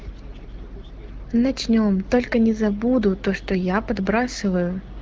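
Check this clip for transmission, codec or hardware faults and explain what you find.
No transmission, codec or hardware faults turn up in this clip.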